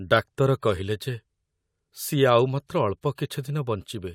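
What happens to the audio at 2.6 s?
Nothing goes wrong at 2.6 s; the speech there plays through intact, with no dropout, click, distortion or other fault.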